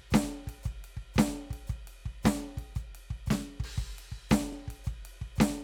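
At about 2.0 s and again at 4.53 s the music stutters briefly, a sign of overlapping chunks. The audio was handled in 2.5 s blocks, and each block began before the previous one ended, so a 25 ms slice plays twice at each join and produces a regular hiccup.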